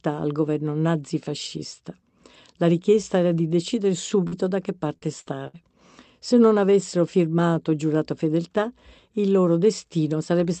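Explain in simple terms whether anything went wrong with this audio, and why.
Something did go wrong. Between 4.27 and 5.56 s there is repeated packet loss (robotic sound). The audio briefly dropped out four times, the longest gap about 61 ms. Each time, the receiver filled the hole by stretching the last bit of sound it had, so that stretch sounds choppy, with small pieces missing. The call connection itself carried the rest normally, with sound reaching up to 8 kHz.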